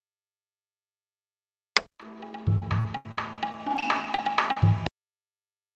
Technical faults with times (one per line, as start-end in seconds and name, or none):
2.01 short concealed packet loss
2.02 lost packet rebuilt from error correction
2.58-4.57 repeated packet loss (robotic sound)